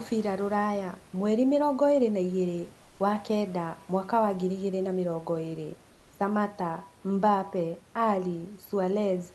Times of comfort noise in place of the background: 2.83-2.95

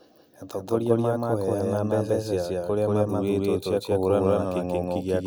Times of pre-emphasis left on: none

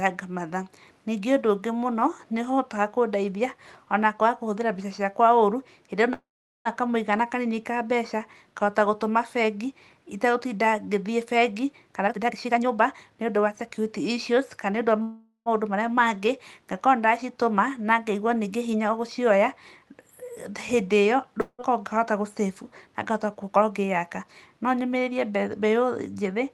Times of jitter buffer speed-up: 12.08-13.78, 22.94-24.24

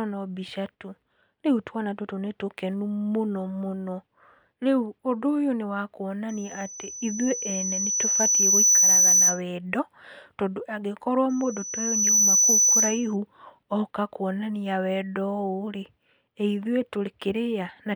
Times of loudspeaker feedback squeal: 6.29-9.42, 11.29-13.16

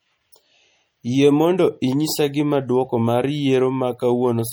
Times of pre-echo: 0.32

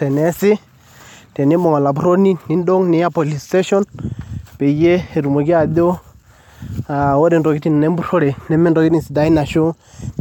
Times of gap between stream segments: 6.22

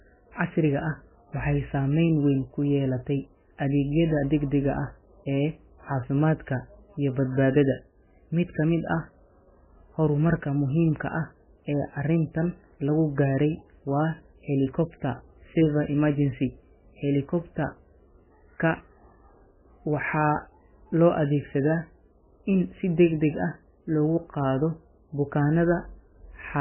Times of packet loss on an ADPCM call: none

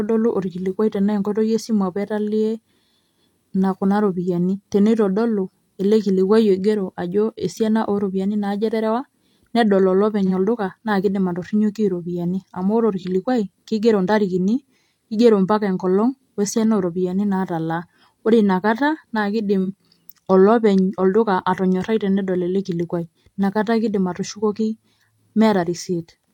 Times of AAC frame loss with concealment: 10.26-10.31, 12.98-13.03, 19.64-19.68

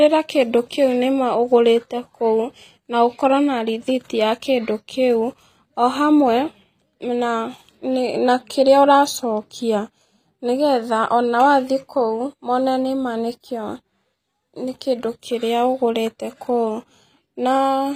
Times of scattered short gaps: none

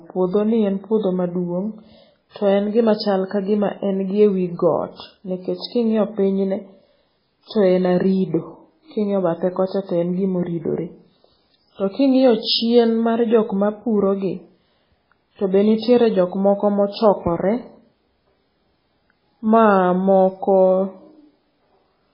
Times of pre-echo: 2.30-2.36, 7.45-7.50

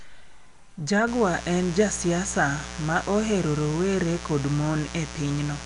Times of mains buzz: 1.07-5.65

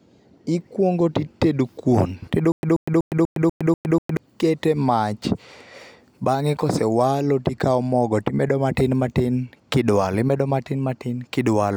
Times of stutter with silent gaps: 2.52-4.17

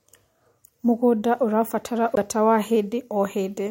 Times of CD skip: 2.15

